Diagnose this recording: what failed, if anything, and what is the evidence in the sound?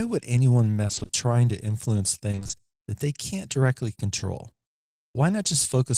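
The network path failed, with repeated packet loss (robotic sound) in this speech from 0.87 to 1.15 s and again from 2.31 to 2.51 s. Short holes of about 20 ms each recur throughout both stretches. Half of each span is patched by stretching the previous sound, giving choppy speech with pieces missing.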